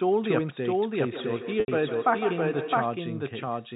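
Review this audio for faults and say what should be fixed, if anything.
The whole clip carries a second copy of the speech trailing roughly 0.7 s behind, at about the same level as the original. It's full-band, dry, with no room tail, so it sounds like a doubled audio track rather than any acoustic echo. The likely cause is the signal being captured twice, once through a slower path, or an edit leaving two out-of-step copies layered together. Mute or remove the duplicate source so only one capture path reaches the mix.

From 1.12 s to 3.11 s there's a feedback echo between two devices. Each syllable comes back at roughly 150 ms intervals, thinner and more ringing on each pass, peaking at about 9 dB below the speech. That's what happens when a second device in the room on the same call plays the far-end audio, and the first microphone picks it up. Each device's echo canceller only handles its own playback, so nothing catches it. 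Keep only one device per room joined to the call, or mute the spare one's speaker and mic.

At 1.60–1.68 s there's a gap of about 80 ms handled by packet loss with pitch repetition. The receiver repeated the last pitch cycle and faded it, so it fades into silence before the speech cross-fades back in. The length fits four lost 20 ms packets. It sits inside the 4 kHz G.711 telephone band. Put the stream on a steadier link or add forward error correction so short bursts of loss don't reach the listener.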